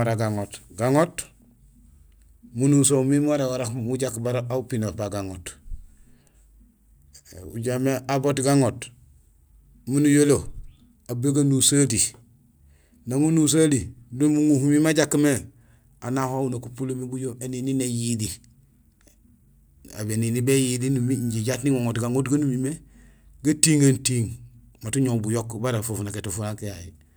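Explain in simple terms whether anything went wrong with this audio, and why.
Nothing went wrong here.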